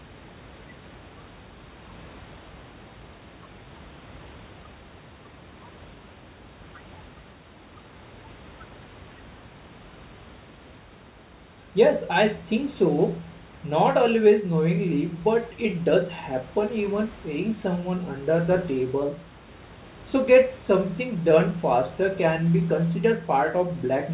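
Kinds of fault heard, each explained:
Nothing stood out on listening, with the room's background noise sitting about 23 dB below the speech and the call path's telephone-band sound stopping at 4 kHz.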